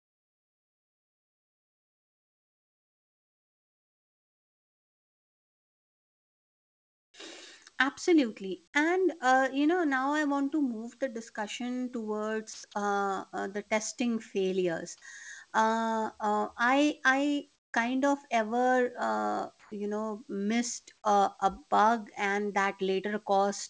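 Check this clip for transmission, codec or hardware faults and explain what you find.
Several transmission faults are audible in this speech clip, all typical of a call link. The audio also stops at 8 kHz, as a G.722 wideband call path would.

Comfort noise in place of the background: from 0 to 7.14 s the room background is a flat, featureless hiss about 28 dB quieter than the real background. It happens again at 17.56–17.74 s, between "uh I I" and "kind of ever uh", about 14 dB down, and at 19.60–19.72 s, between "kind of ever uh" and "you know missed uh", about 5 dB louder. The likely cause is the sender pausing transmission in quiet stretches while the receiver synthesises roughly matching noise.

Jitter buffer slow-down: from 7.16 to 7.66 s the speech drags at 90% speed with its pitch unchanged. The receiver repeated pitch periods to add 52 ms and rebuild a reserve in its buffer.

Jitter buffer speed-up: from 7.73 to 8.51 s the speech hurries at 106% speed, pitch intact. 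The receiver trimmed about 50 ms of pitch periods to shrink a buffer that had grown too full.

Sound dropped by the voice detector: at 12.54–12.64 s, just before "uh uh the testing", 100 ms of speech gives way to steady noise, and 10 ms more disappears at 12.72–12.74 s. This likely happens because the sender's detector mistook the speech for background and stopped sending.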